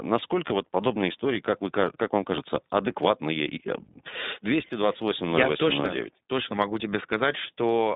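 The whole recording carries iLBC codec damage, and it is plainly audible. The speech sits in a narrow telephone band of roughly 150 Hz to 3.7 kHz. Each 20 ms frame is coded on its own, without reference to the previous one, which leaves the speech intelligible but slightly rough and synthetic in texture. The character of the coding fits iLBC's 15.2 kbps mode.

At 0.50 s, just before "вот подобные истории как", a DC step occurs. The waveform's zero line jumps abruptly, so a short low thump sounds under the speech while the speech itself continues unchanged. The offset does not hold. It bleeds away as it would through a high-pass filter at about 2 Hz, so the baseline settles back over a fraction of a second.

A second DC step at 5.80 s, right before "точно могу", behaves the same way: another low thump, followed by the same gradual return of the baseline.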